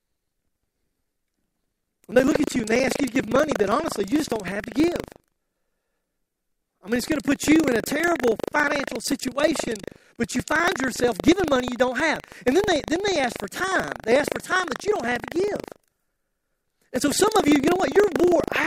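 Speech runs through the whole clip under a steady buffer tearing fault. A robotic rattle at 25 Hz sits on the sound wherever there is signal and stops in the gaps. The writer and the hardware reader of the ring buffer have drifted, so they cross once every 40 ms period. About a tenth of each period carries audio from roughly 150 ms earlier, with a hard splice at both ends.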